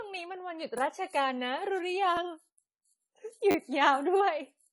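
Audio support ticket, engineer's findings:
Dull, smeared sound with warbling on sibilants and nothing above 11.5 kHz throughout. Likely AAC compression at a low bitrate, with the encoder cutting high bands and coarsely quantising the rest.

Repeated buffer at 0.78 s and 2.17 s: one 10 ms chunk replayed, heard as a click. At 3.51–3.55 s it replays four times, a brief buzz. Points to late playback data.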